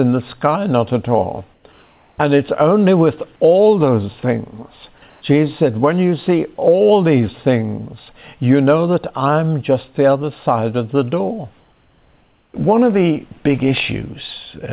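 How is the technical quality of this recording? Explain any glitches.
Two brief patches of comfort noise in place of the background stand out, at 1.54 to 1.64 s and 5.10 to 5.22 s. The audio is band-limited with nothing above 4 kHz, which fits a narrowband call codec such as G.711.

In both pauses the quiet background, about 42 and about 39 dB below the loud parts, gives way to a steady, featureless hiss. This is likely discontinuous transmission, with the receiver synthesising noise. The first patch is about 2 dB quieter, the second about 2 dB louder. On a spectrogram each shows as a smooth, textureless block with sharp edges. The waveform shows a small step in level.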